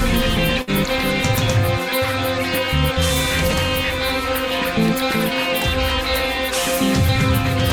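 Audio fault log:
0.61–0.70 s, burst of packet loss: the last music frame is held and faded for about 60 ms. Playback then resumes, skipping roughly 60 ms of material.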